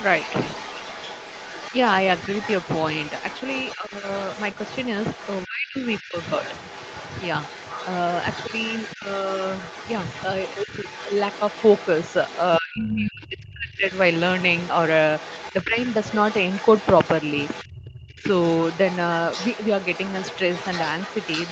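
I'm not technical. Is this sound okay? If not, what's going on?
No. Throughout the clip a faint second voice, the other side's voice leaking through, sits under the talker, likely because the echo canceller missed some loudspeaker sound.

Speech suppressed in double talk makes the talker briefly dip or drop out at 3.76–4.06, 5.44–6.17, 8.96–9.07, 10.64–10.86, 12.59–13.86, 15.63–15.78 and 18.12–18.29 s, likely while both sides talked at once. The drops are worst around 5.4–6.2 s and 12.6–13.9 s.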